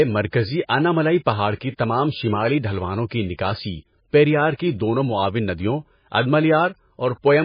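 Throughout the speech, heavy MP3 compression is the likely cause of a watery, swirly texture and nothing above 5 kHz, which fits a very low bitrate near 18 kbps. Pre-echo appears at 1.55 to 1.61 s, at 3.09 s, and at 4.54 to 4.59 s. Quantisation noise spreads ahead of sharp attacks, giving brief hiss and softened onsets.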